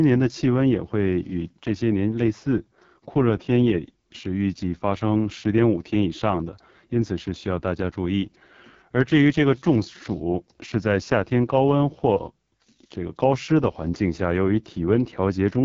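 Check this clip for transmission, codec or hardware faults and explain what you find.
The whole clip carries the AMR wideband (HD Voice) codec, heavily damaged. The speech is coded up to 6.4 kHz by a pulse-excited vocal tract model, and the 6.4 to 7 kHz band is only shaped noise. The rough, raspy texture fits the lowest 6.6 kbit/s mode. A spectrogram would show a hard ceiling near 7.3 kHz, blurred and broken harmonics, and a hazy, structureless top band. The waveform would look coarse.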